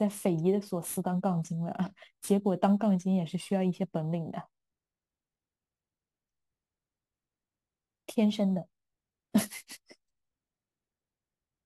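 A speech recording that went through a crude rate conversion throughout, keeping the nearest sample without filtering, which fits a 48 kHz to 44.1 kHz step. This leaves a gritty, inharmonic fizz roughly 30 dB below the speech that tracks louder, brighter sounds.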